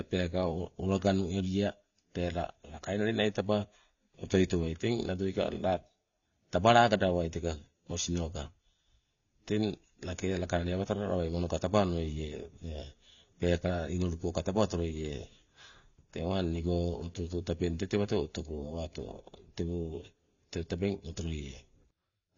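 From start to finish the speech has nothing above 7 kHz, leaving it dull, with a smeared, warbling texture on sibilants and sustained sounds. This is likely AAC compression, with the encoder discarding high frequencies and coarsely quantising the rest, which fits a low bitrate near 24 kbps.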